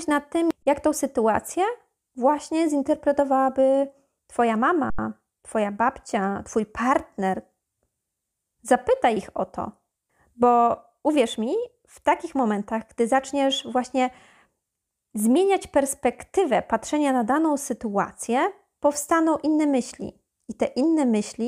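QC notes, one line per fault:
0.63–0.66 s, underrun with held sample: output buffer ran empty after "nad tym" and the converter held its last value, so speech goes flat for 36 ms and resumes softly at "jak tą sytuację właśnie".
4.90–4.99 s, underrun with held sample: buffer emptied for 85 ms, which fits a 4096-sample buffer. The held level silences speech without a click, and playback continues where it stopped.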